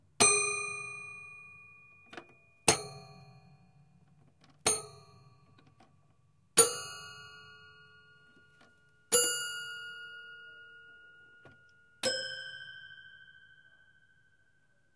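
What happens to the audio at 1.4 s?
At 1.4 s the audio is intact: the sound continues without any dropout, click, distortion or other audible fault.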